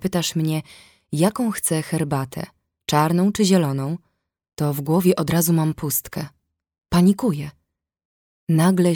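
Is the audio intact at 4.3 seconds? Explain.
Yes, the audio is intact at 4.3 seconds, with no dropout, click, distortion or other fault audible at that moment.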